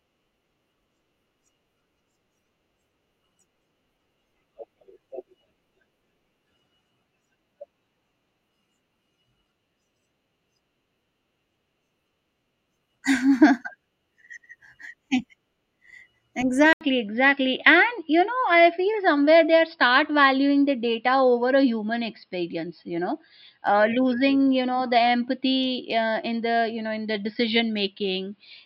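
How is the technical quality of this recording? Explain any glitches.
The recording has one clear fault: from 16.73 s to the end, speech suddenly turns duller and boxier. The likely cause is an input switched to a poorer device mid-recording. That device passes nothing above 5.3 kHz, so the top end vanishes while loudness stays about the same. A spectrogram shows an 80 ms blank gap at the switch, then a flat ceiling at 5.3 kHz and a faint new noise floor far beneath the speech.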